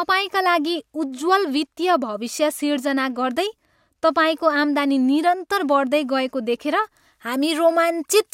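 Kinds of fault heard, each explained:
Pre-emphasis left on: from 6.84 s to the end at 8.33 s the speech turns thin, bright and hissy on sibilants, with highs about 8 dB too strong at 10 kHz. A CD-style 50/15 µs treble boost was applied without the matching de-emphasis cut.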